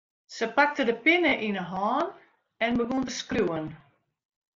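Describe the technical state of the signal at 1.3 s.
At 1.29 to 1.32 s there is concealed Bluetooth headset packet loss. About 22.5 ms of the speech never arrived, which fits three consecutive dropped headset frames. The receiver filled the gap by repeating the stretch of recent waveform that best matched what came before. Because this is a short run and not a single loss, it is heard as a brief buzzy tone held at full level, with a small warble where the real speech returns.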